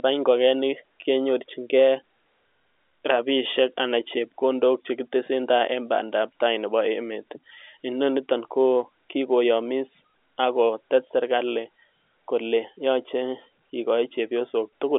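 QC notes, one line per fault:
No faults found in this telephone-band speech.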